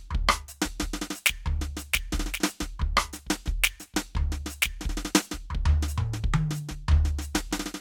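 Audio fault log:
Nothing stood out on listening to this music.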